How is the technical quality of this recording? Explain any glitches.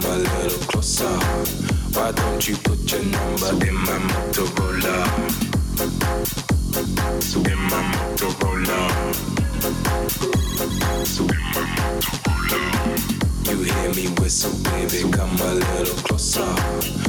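The recording has one persistent fault: gain pumping throughout. The gain ducks by around 5 dB under each loud sound and recovers in the gaps, likely from excessive input gain driving a fast limiter.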